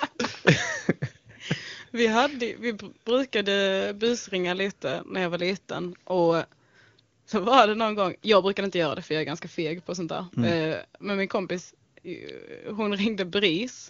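No technical faults occur in this speech clip, which carries AMR wideband (HD Voice) coding at a rate high enough to leave it clear.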